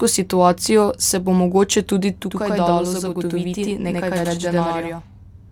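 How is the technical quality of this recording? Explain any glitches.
The recording has one fault: a channel delay (doubling) starting at 2.25 s, after "se bo mogoče tudi", and lasting to the end. One channel runs 93 ms late, which fits a 4096-sample buffer, and the mono sum gives an equal-level slap echo on the speech.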